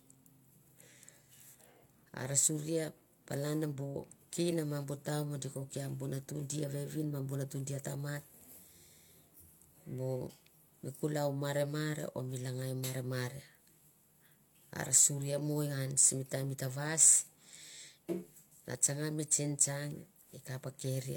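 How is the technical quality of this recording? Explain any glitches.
Nothing stood out as a technical problem on listening to this recording, so there are no glitches to explain.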